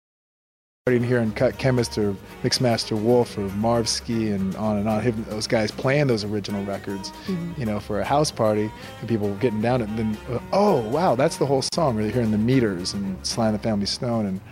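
The audio opens on silence that lasts until 0.87 s, where sound cuts in abruptly in mid-flow with no natural attack or fade. This is a cut-off start: the recording or stream began late and caught the sound partway through. At 11.69 s the continuous sound drops out for about 37 ms, until 11.72 s, then resumes where it stopped. This is a gap at a join of encoded pieces. Separately encoded sections were spliced without trimming, so the encoder's start-up delay and the padding of the final frame remain as a hole. The codec softens the edges of that hole.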